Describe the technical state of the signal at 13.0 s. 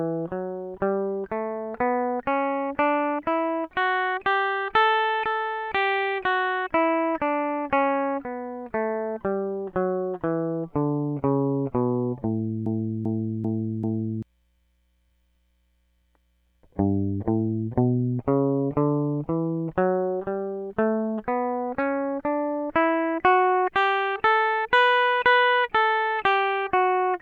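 At 13.0 s the music is caught in a broken-record loop running from 12.66 s to 14.23 s. A fragment about 0.39 s long plays four times back to back, identical each pass, so the passage stutters in place instead of moving forward. The likely cause is a stall in the player, encoder or stream, which kept resending the last buffered chunk. The material that belonged in that span never plays.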